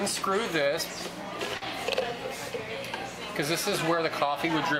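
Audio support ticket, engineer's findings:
Short stall from a late packet at 1.57–1.65 s. Sound briefly held, slight buzz. Probable component: receiver jitter buffer. Packet arrived late, buffer ran dry, last sound stretched about 44 ms, playback resumed from same point. Nothing lost, latency up 44 ms afterward. Spectrogram: horizontally smeared, repeated texture across the gap. Waveform: near-periodic repeated cycles, small level dip.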